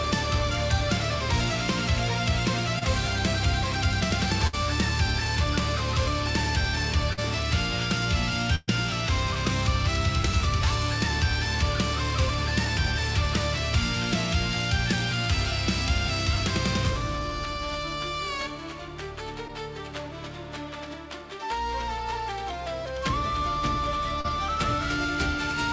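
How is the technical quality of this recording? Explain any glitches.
The recording has audible packet-loss damage of two kinds. It came through a call path whose coding leaves nothing above 8 kHz, which fits a wideband codec such as G.722.

Short concealed packet loss occurs at 2.79–2.83 s, 7.13–7.19 s, 19.48–19.51 s and 24.21–24.26 s. In each case roughly 20 to 40 ms of audio failed to arrive in time. The decoder covered the hole by extending the preceding sound, either pitched or as shaped noise, and then crossfaded back. These show up as brief smears or wobbles.

A burst of packet loss occurs at 4.47–4.55 s and 8.55–8.70 s, removing about 60 ms and 120 ms of audio respectively. The receiver kept synthesizing the last sound while attenuating it, producing a held buzz or fading hiss. The second burst decays into about 10 ms of near-silence. Playback then resumes further along, with the intervening material absent.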